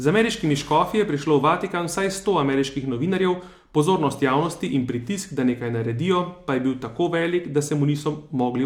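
Nothing to flag here, since no technical faults turn up anywhere in this bit of speech.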